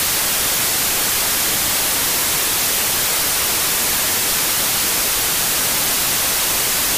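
Loud, harsh broadband noise fills the entire clip, the signature of samples built from the wrong bytes: the reader has assembled each sample from mismatched bytes, off by one, swapped in order or misaligned, so the rapidly fluctuating low bits land in the high-order positions and dominate every value. Unlike added hiss or a noisy source, the noise is not layered over an intact signal. It replaces it.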